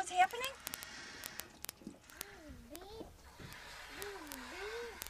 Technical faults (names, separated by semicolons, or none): word clock ticks